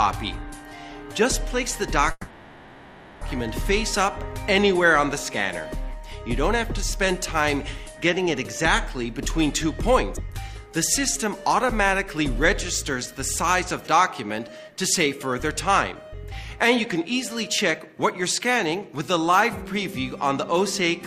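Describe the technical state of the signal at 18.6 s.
At 18.6 s the signal is near the end of a jitter buffer speed-up that runs from about 14.99 s to 18.89 s. The receiver's buffer had built up more audio than its target, so it trimmed many short slices, each one or a few pitch periods long, to catch up. Around 0.3 s is dropped in total, giving playback roughly 7% faster. The sound feels hurried, yet its pitch stays put, unlike a resampling speed error, which raises pitch too.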